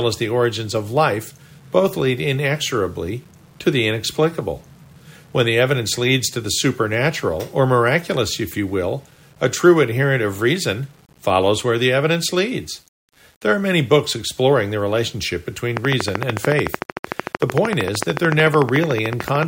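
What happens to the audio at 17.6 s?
At 17.6 s a train of clicks is running over the speech. It starts at 15.77 s, right after "books exploring the relationship", and continues to 19.44 s. The pulses come at a steady 13.4 per second, about fifty in all. They share much the same shape and peak roughly 15 dB above the speech. The result is a rapid, even ticking that sits on top of the talking and fills the pauses too. A repeating pulse this regular is likely interference from nearby equipment or a faulty connection or power supply.

Underneath, the same moment carries the low bit depth without dither heard through the whole clip. The sound points to about 9-bit resolution, with values rounded to the nearest step and no dither added. Because of that rounding, the error tracks the signal instead of staying a steady hiss. It sits roughly 35 dB below the speech. Quiet syllables and decaying word endings turn gritty, and the faintest parts break up into a grainy sputter.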